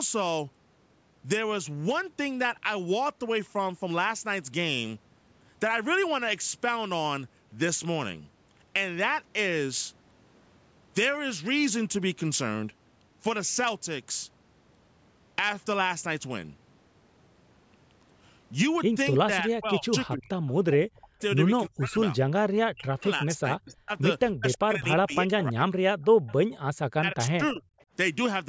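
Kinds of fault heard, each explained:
Speech suppressed in double talk: from 19.25 to 27.68 s the speech repeatedly dips, by roughly 40 dB at the deepest, or cuts out in pieces, at 19.25–20.31, 20.62–21.2, 21.67–22.19, 22.69–23.91, 24.37–25.65 and 26.94–27.68 s. Each dip lasts from a fraction of a second to about a second. The likely cause is an echo canceller that, with both sides talking at once, could not tell this talker from loudspeaker echo and turned everything down.
Echo leak: a faint delayed copy of the speech appears from 26.02 to 26.34 s, about 25 dB below the talker, then as a brief scrap near 27.8 s, lower still at about 40 dB down. Both trail the original by 320 ms. This is likely the far side playing the call on a loudspeaker, with its echo canceller failing to remove everything its microphone picked up, so part returned.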